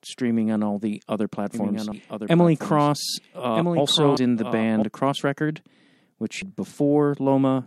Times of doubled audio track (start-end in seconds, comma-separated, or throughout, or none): 1.54-4.82